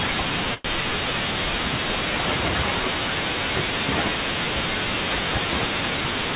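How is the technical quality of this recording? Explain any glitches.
Two glitches stand out in this speech recording, which has passed through a telephone-band call path with nothing above 4 kHz, consistent with a G.711 A-law codec at 64 kbps.

From 0.54 to 0.78 s there is a call audio freeze. Packets were likely held up in transit, so the jitter buffer ran dry. The receiver filled about 104 ms by stretching the last sound into a fading buzz or hiss rather than leaving silence. The speech then resumes where it left off, delayed but not missing anything.

From 5.90 to 6.34 s there is a jitter buffer speed-up. The buffer had built up more delay than it wanted, so the receiver trimmed out short pitch-period slices, roughly 70 ms in all. The speech plays at about 114% speed at unchanged pitch and sounds hurried.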